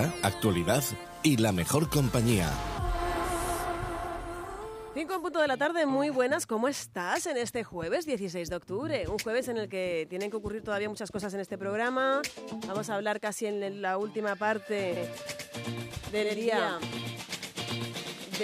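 A doubled audio track starts abruptly at 14.97 s and lasts to the end. A full-band copy trails about a tenth of a second behind, roughly 5 dB quieter, with no decay or room colour, likely from a second, slower capture path.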